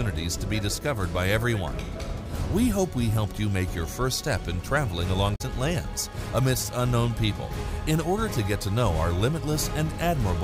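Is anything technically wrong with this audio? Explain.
Yes. Damaged data in a compressed stream appears from 5.32 to 5.41 s. For about 90 ms, the compressed data carrying this stretch of audio is corrupted, so the decoder cannot interpret those frames correctly. It loses its place and has to hunt forward for the next valid frame header before playback can continue. What you hear is a short chirp, squawk, click or brief hole that breaks the flow.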